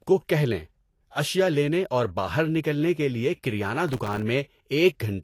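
Across the whole speech clip, the sound is dull and swirly, with nothing above 14.2 kHz. This is likely low-bitrate audio saved at a high bitrate: a 192 kbit/s MP3 carrying the smearing of an earlier coarse encode, around 36 kbit/s Vorbis, which the larger file cannot undo.

From 3.89 to 4.23 s, right after "نکلنے کے لیے کریانہ", there is processor overload crackle. Around thirty very short buffers of a millisecond or two miss their deadlines and drop to silence. Unlike a single dropout, the result is a dense gritty tearing that ends when the load clears.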